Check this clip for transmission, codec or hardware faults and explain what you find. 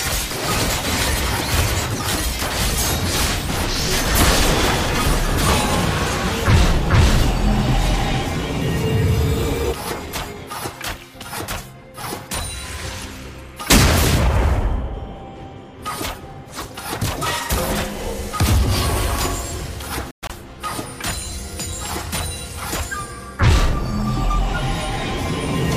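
One fault is audible. Bluetooth dropout, 20.11 to 20.31 s: the sound cuts out in gaps up to 116 ms, likely from late wireless packets being discarded, then resumes as if it had played on.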